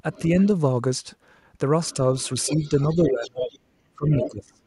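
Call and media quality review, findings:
Other side's voice leaking through: faint scraps at 0.13–0.26 s and 1.87–1.96 s, strong from 2.19 to 3.58 s, near speech level at 4.21–4.29 s. Likely incomplete echo cancellation of loudspeaker playback.

Speech suppressed in double talk: slight dip at 2.48–2.73 s, deep cut-outs at 2.96–3.47 s and 3.95–4.63 s. Likely the echo canceller attenuating near-end speech during overlap.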